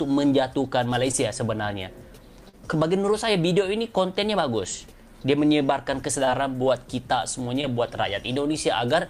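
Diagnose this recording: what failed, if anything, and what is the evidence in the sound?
The network dropped packets, giving short concealed packet loss at 1.11, 2.49, 6.25 and 7.61 s. The decoder bridged each 20–40 ms gap by extending the preceding sound, leaving brief smears.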